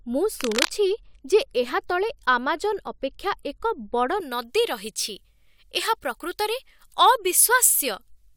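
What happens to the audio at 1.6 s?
Nothing goes wrong at 1.6 s; the speech runs through that moment intact, with no dropout, click or other fault.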